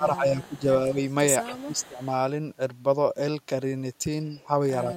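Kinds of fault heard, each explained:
Speech suppressed in double talk: with both ends likely talking at once, the echo canceller could not separate the near voice from loudspeaker echo and turned both down, so the speech dips by about 10 dB near the start and end, and by about 20 dB from 1.6 to 2.0 s.
Echo leak: the far end's echo canceller likely left part of its microphone's loudspeaker pickup in the return signal, so a copy of the speech comes back 170 ms late, in faint scraps about 30 dB down and, from 0.9 to 2.1 s, stronger at about 20 dB down.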